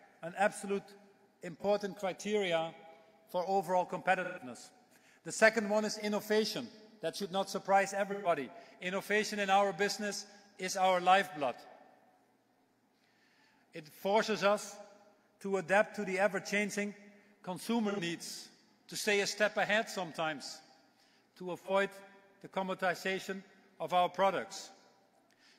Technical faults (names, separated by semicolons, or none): AAC frame loss with concealment